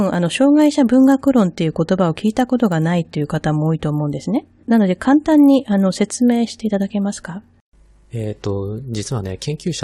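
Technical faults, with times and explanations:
Throughout, resampler restarted on every block: each 20 ms block converted separately, likely from 24 kHz to 48 kHz, so edge errors make a 50 Hz buzz under the speech.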